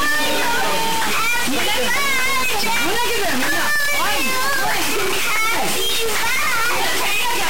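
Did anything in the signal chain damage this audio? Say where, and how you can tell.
Yes, in two places. The first is at the converter or digital data path: the whole clip carries a distortion riding on the signal, and quiet stretches fill with a gritty noise floor instead of falling silent. That is likely a stuck bit, one data line held permanently at 0 or 1, so roughly half the samples are offset by that bit's weight in a pattern that follows the waveform, and the error flips with the sign of small values.

The second is in the driver or buffer stage, which shows periodic USB or driver dropouts. From 0.06 s to 7.36 s, something blocks the audio path every 0.1 s. Each time, roughly half a millisecond of audio is lost and replaced with silence, about seventy times in all. These tiny, evenly spaced gaps are heard as a regular ticking at 10 per second, and they stand out wherever there is signal to interrupt.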